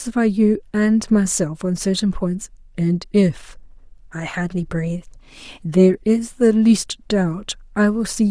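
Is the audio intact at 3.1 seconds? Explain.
Yes, the speech at 3.1 seconds is intact, with no audible fault at that moment.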